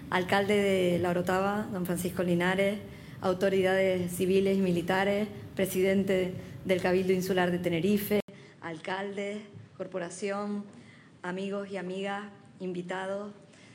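At 8.20 s the sound drops out for 80 ms, then returns duller and a little quieter, with nothing above 9.7 kHz and a new, faint background noise continuing to the end. The likely cause is an input switched to a poorer device.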